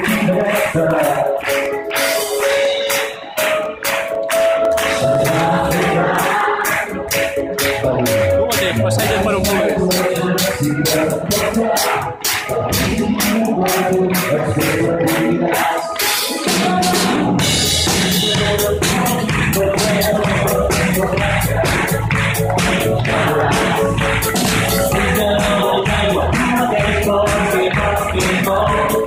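The audio carries periodic USB or driver dropouts from 0.16 s to 7.4 s: a regular tick every 0.25 s, around thirty in all, each where roughly a millisecond of signal drops to silence. The even four-per-second spacing points to a background process repeatedly stalling the USB bus or audio driver so the stream briefly starves. The ticks are audible only because signal is present when each gap lands, producing a small discontinuity at either edge.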